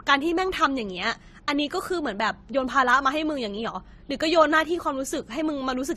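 Transcoding between lossy codecs runs throughout the speech. Nothing sounds above 14 kHz, and two kinds of coding artefact overlap: those of the first codec are heard together with those the second added on top. This likely comes from an Opus encode near 24 kbit/s re-encoded as AAC-LC near 48 kbit/s.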